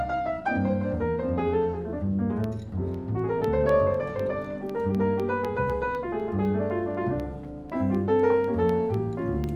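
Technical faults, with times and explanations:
2.44 to 9.44 s, periodic USB or driver dropouts: a tick repeats every 0.25 s, four times a second, about thirty in all. At each tick, a tiny fraction of a millisecond of audio drops out and is replaced by silence, likely because something stalls the USB bus or audio driver on a fixed schedule. The abrupt gap breaks the waveform, producing a click, and the steady spacing gives the ticks their even rhythm.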